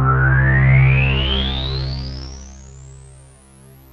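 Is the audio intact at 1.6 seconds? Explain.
No. At 1.6 seconds you're right in the middle of some zipper noise, which runs from about 1.38 to 2.75 s. The level is being pulled down by roughly 25 dB, but instead of a smooth ramp it drops in hard 2 dB steps, around ten a second, with no smoothing between them. Each jump puts a tiny click in the waveform, so you get a ticking, zipping texture riding on the sound while the fade happens.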